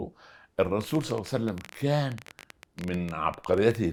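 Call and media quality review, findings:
Train of clicks, 0.81 to 3.76 s. Around 40 similar sharp ticks, about 13.9 per second, irregularly spaced, peaks about 5 dB above the speech, audible through pauses too. Likely cause: repeated impulsive interference, such as nearby equipment coupling into the capture path or a faulty connection or power supply injecting a brief pulse each time. Ticking sits on top of the signal rather than replacing it.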